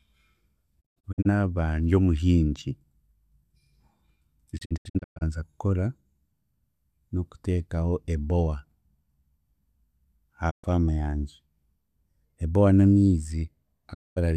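The speech breaks up from a digital broadcast dropout at 0.80 to 1.27 s and 4.57 to 5.23 s, as scattered holes with runs of up to 120 ms, then as single gaps at 10.49 to 10.65 s and 13.93 to 14.18 s. The receiver muted on failed frames, fading to clean silence within 20 ms, with no hiss or warble as analogue fading would give.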